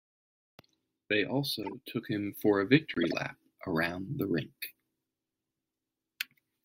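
A speech recording with two kinds of bitstream damage. At 1.63 to 1.73 s, just before "took him for a", a corrupt frame was decoded: a short squeaky burst where flipped bits in a few compressed frames were played anyway, their misread gains and codes throwing energy to the wrong frequencies. It peaks around -30 dBFS and shows on a spectrogram as an odd block of misplaced energy. At 2.94 to 3.14 s, between "took him for a" and "around the rink", a corrupt frame was muted: the decoder rejected damaged frames and silence was substituted, a 0.2 s hole that fits seven frames. On the waveform it is an abrupt flat line, and on the spectrogram an empty vertical band, with timing preserved.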